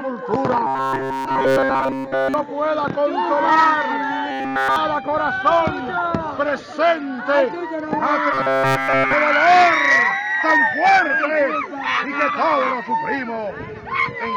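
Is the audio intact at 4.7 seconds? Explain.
No. At 4.7 seconds the audio is caught in robotic sound from repeated short buffers, running from 4.31 to 4.76 s. Throughout that span the sound turns into a rigid, metallic buzz pitched at 134 Hz that follows the original only roughly. The likely cause is audio arriving too slowly, so a fragment of about 7.5 ms is looped over and over while the real material is skipped, which fits that fixed buzz frequency.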